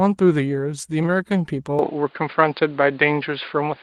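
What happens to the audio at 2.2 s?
At 2.2 s the speech is dull and boxy, with nothing above about 4.9 kHz. From 1.79 s to the end, the input likely switched to a poorer device, adding a level shift and faint new noise.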